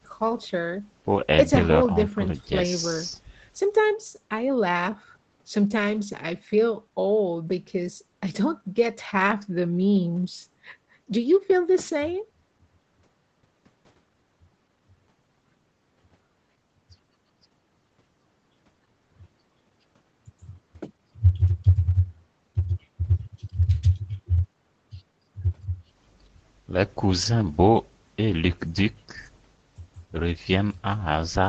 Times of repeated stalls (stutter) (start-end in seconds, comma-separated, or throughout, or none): none